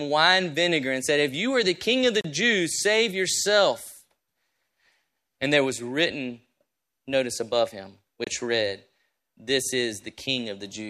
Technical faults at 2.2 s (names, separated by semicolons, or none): gap at a join of encoded pieces